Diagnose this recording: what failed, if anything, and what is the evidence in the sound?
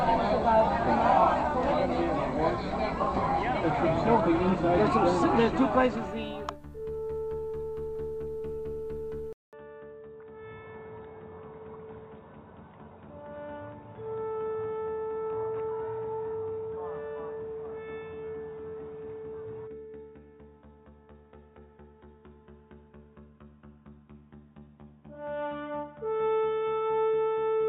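At 9.33 s the audio drops out for about 0.2 s, then returns roughly 10 dB quieter, duller and boxier, with nothing above 3.8 kHz through to the end and a new, faint noise floor around 50 dB down. On a spectrogram, the upper band vanishes abruptly after a brief blank gap, leaving a hard ceiling at 3.8 kHz. The waveform shrinks at the same point. This points to the input switched to a poorer device at the driver level, likely a headset's narrowband call profile.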